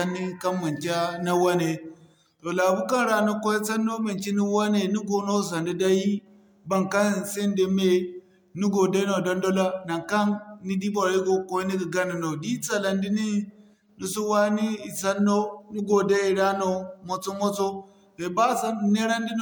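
Throughout the speech, the sound is swirly, smeared and hollow, with blurred consonant attacks and nothing above 20.1 kHz. This is generation loss, likely from re-encoding about five times through MP3, consistent with 128 kbit/s passes, each on a shifted frame grid compounding quantisation noise.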